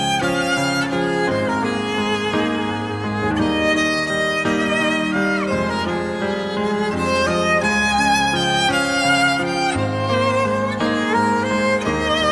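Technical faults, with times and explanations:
Nothing technical stands out here; there's no fault to point to anywhere in the audio.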